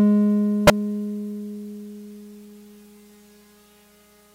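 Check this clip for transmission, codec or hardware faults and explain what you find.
One codec fault is present in this music clip. From 0.67 to 0.70 s, a corrupt frame was decoded: flipped bits in what sounds like a single compressed frame were played regardless, so misread gains and codes put energy at wrong frequencies, heard as a loud, short chirp, squeak, blip or burst of noise reaching roughly -5 dBFS.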